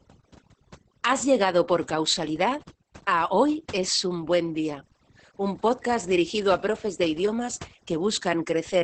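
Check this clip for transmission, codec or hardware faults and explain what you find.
Two faults run through the whole speech recording: overdone noise removal and heavy Opus voice compression.

Overdone noise removal, throughout: the noise reducer was set too aggressively, muting any frequency band it judged close to the noise level, including quieter parts of the voice. Between phrases the background drops to near silence dotted with twinkling specks. A spectrogram shows a mostly black background with scattered isolated dots, and gaps eaten into the weaker harmonics.

Opus voice compression, throughout: the sound points to Opus in its SILK speech mode at roughly 10 kbps, wideband, with 20 ms frames. At that rate the excitation is coded coarsely, so the voice comes out muffled, hoarse and slightly robotic. A spectrogram shows a hard ceiling with nothing above about 8.8 kHz, and harmonic detail below it looks smeared and blocky.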